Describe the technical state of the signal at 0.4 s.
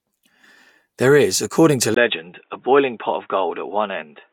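At 0.4 s the speech signal is intact, with no audible technical fault at that moment.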